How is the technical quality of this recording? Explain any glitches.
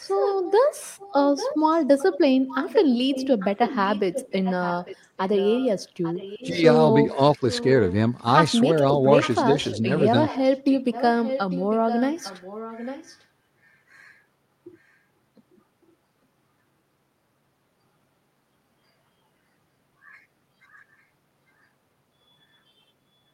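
The recording is marred by repeated echo and two brief level dips, both typical of a speakerphone call.

Echo leak runs from 0 to 0.52 s, 0.98 to 2.18 s, 2.5 to 5.68 s, 6.02 to 6.47 s, 7.36 to 8.2 s and 9.22 to 13.25 s. A distinct copy of the speech returns 849 ms late, roughly 10 to 20 dB quieter. The likely cause is a far-end echo canceller letting its loudspeaker's pickup through. Room reverberation would smear the sound instead of repeating it as a separate copy.

Speech suppressed in double talk occurs at 6.5 to 6.63 s and 7.11 to 7.43 s. The speech dips by roughly 10 dB while the other side's sound plays on the loudspeaker, likely because the canceller turned down both signals. It is a partial dip, not a true dropout to silence.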